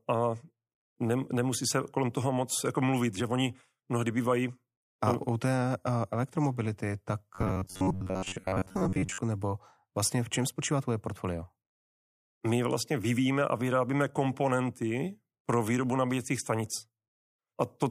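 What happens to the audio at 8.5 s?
At 8.5 s the speech has turned into a rigid, metallic buzz pitched at about 94 Hz that only loosely tracks the words, a stretch running from 7.35 to 9.18 s, between "té eh elektromobility tak" and "nebo vlastně v čem". This is robotic sound from repeated short buffers. Audio is likely arriving too seldom, so a segment of roughly 11 ms is looped for most of that span while the real signal is skipped, imposing the fixed buzz pitch.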